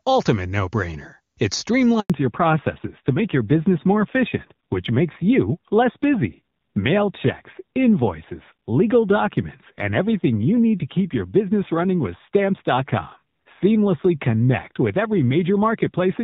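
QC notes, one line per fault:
2.00–2.10 s, handover gap: The call was passed from one network to another, and no speech frames arrived during the switch, so the decoder had nothing to play for about 100 ms. The speech fades out within a few tens of milliseconds and drops to silence until the new link takes over at 2.10 s. Whatever was said in that tenth of a second is missing, leaving a brief hole in the flow.
2.10 s to end, fallback to narrowband: After the handover, the call came back on an older narrowband codec instead of HD Voice. The clear, wideband speech before the gap fits AMR wideband at a high rate, and the rougher sound afterwards fits AMR-NB at around 7.4 kbit/s. From 2.10 s on, nothing above 4 kHz remains. Sibilants and breathiness lose their edge, and the speech turns duller, boxier and rougher.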